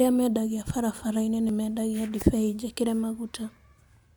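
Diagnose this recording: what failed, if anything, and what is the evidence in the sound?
At 1.49 s there's a single tiny skip: an overlap between stream segments, where the player trimmed a few milliseconds of real speech at a segment join, so the waveform jumps.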